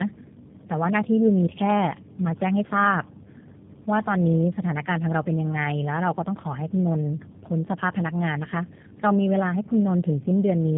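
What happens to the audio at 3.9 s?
At 3.9 s the speech carries tandem speech coding, present across the whole clip rather than at that instant alone. It passed through G.729A at 8 kbit/s, was opened out to G.711 A-law, then squeezed through G.729A again, so the second coder rebuilt an already degraded signal. The result sounds rough, muffled and warbly, with nothing above 3.7 kHz. A single G.729A pass would share that band edge but sound less smeared and watery.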